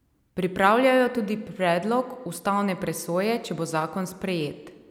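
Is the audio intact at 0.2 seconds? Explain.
Yes, the audio is intact at 0.2 seconds, with no audible fault at that point.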